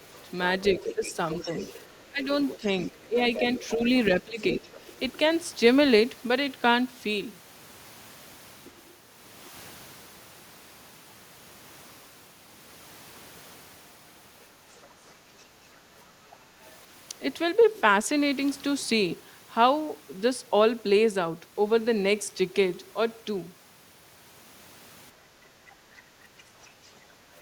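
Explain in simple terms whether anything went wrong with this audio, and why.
Several things went wrong, all tied to how the device handled sound from the other end of the call.

Other side's voice leaking through: a second voice can be heard under the speech from 0.16 to 5.18 s, fairly noticeable there, then faintly at 8.64 to 8.88 s, 14.75 to 14.86 s, 16.3 to 17.81 s, and from 25.69 s to the end. The likely cause is the talker's loudspeaker playing the far side into the microphone, with the echo canceller failing to remove all of it.

Speech suppressed in double talk: between 0.24 and 4.71 s, while that other voice is also present, the main speech dips sharply in loudness, adding up to about a second of weakened or broken-up speech. This is likely the echo canceller being unable to separate the local talker from the echo, and turning both down together.

Background gated by the echo canceller: from 25.13 to 25.33 s the room sound briefly drops for roughly 150 ms, a mild but audible dip, then comes back. 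The canceller clamped down on the microphone while the loudspeaker was active, taking the background with it, and released it a moment later.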